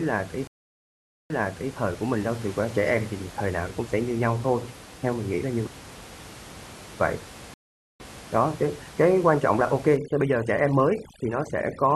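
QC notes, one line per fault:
0.47–1.74 s and 7.54–8.28 s, stream reconnect: the connection dropped, leaving 0.83 s and then 0.46 s of silence before a fresh decoder joined mid-stream. Each time the server resent a burst, so the speech resumes earlier and repeats about 0.44 s and 0.28 s.
9.97–11.96 s, overdone noise removal: noise reduction set too strong pushes single frequency bands to near nothing whenever they approach its noise estimate, and quieter speech detail goes with them. The room noise, about 19 dB below the speech, drops and breaks up into twinkling specks.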